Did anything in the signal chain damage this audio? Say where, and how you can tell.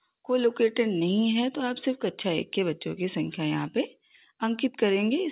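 No, nothing in the chain damaged it; the audio simply came over a call link, and the way everything stops at about 4 kHz is just the ordinary narrow band you'd expect from a telephone-style codec like G.711, not a failure.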